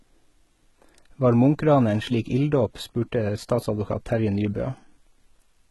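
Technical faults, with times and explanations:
Throughout, HE-AAC compression: the speech carries heavy codec damage, with sibilants sounding gritty and metallic and the top end bright but synthetic, as though the treble had been pasted on rather than recorded. This is likely spectral band replication, copying lower bands upward under a coarse envelope, at a very low bitrate, around 16 kbps. A spectrogram would show a hard ceiling near 11.8 kHz, with upper harmonics that repeat lower patterns and fail to line up across the crossover.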